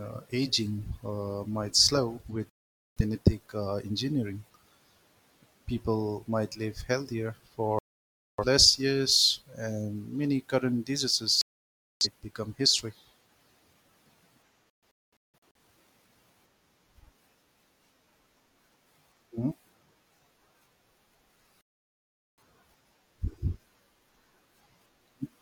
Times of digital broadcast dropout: 2.50-3.01, 7.79-8.44, 11.41-12.07, 14.84-15.59, 21.61-22.42

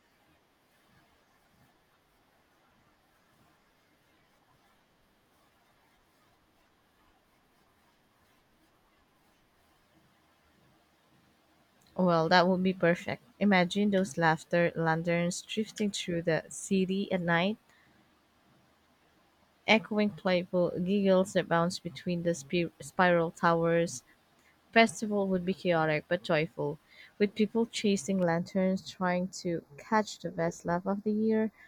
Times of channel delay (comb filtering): 28.23-31.67

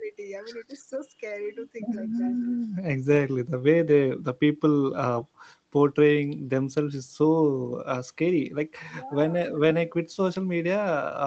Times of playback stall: none

